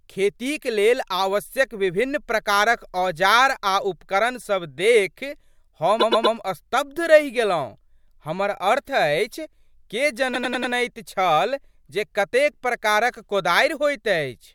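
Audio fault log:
5.99–6.35 s and 10.33–10.72 s, repeated frames: the speech stutters, replaying a 120 ms slice three extra times before "स्तब्ध रहि" and a 96 ms slice four extra times before "छल जे". A run of compressed frames was written more than once, consistent with 24 ms frames, so the decoder plays the same audio again, adding 360 ms and 384 ms.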